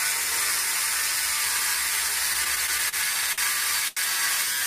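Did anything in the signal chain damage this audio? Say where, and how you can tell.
Yes, the damage is at the network stage, in the receiver's jitter buffer. From 2.33 to 2.95 s there is a stutter of repeated stalls: six brief holds totalling about 90 ms, the longest 37 ms. Packets arrived slower than playback, so the buffer kept running dry and the last sound was extended each time. Nothing is lost, and the audio resumes exactly where it paused, which distinguishes this from packet loss.

Two isolated short stalls from a late packet follow, at 3.33 to 3.40 s (51 ms) and at 3.88 to 3.99 s (89 ms). Each time a single packet missed its slot and the receiver stretched the last sound until it arrived. Unlike the stutter, each is one sustained hold followed by a clean continuation, not a train of hiccups.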